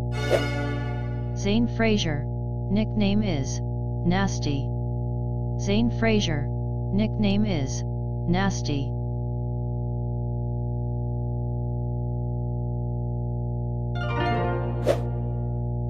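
A steady mains hum runs under the audio from start to finish. It sits at 60 Hz, with some low harmonics above it. The hum is roughly as loud as the wanted sound itself. A ground loop or a nearby transformer is feeding the power line into the signal path.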